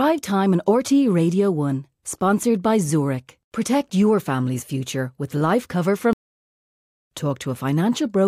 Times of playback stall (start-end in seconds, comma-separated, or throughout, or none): 6.13-6.85